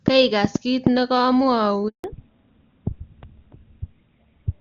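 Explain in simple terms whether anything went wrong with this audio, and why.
Yes, three things went wrong. From 0.08 to 0.88 s there is a train of clicks: about four sharp ticks at uneven spacing, sitting loudly on top of the speech rather than replacing it. That points to interference from nearby equipment or a faulty connection or power supply as the likely cause, not to the phone network.

At 1.88 s comes a handover gap: the speech stops completely for 0.16 s, until 2.04 s. The phone was switching the call between networks and nothing came through meanwhile. Unlike the clicks, this is a brief silence, and that moment of speech is simply lost.

Right after that, from 2.04 s to the end, there is a fallback to narrowband. The call left HD Voice for an older phone codec, so everything above 4 kHz is gone and the voice sounds duller and rougher. Unlike the gap, nothing goes missing; it just sounds worse for the rest of the clip.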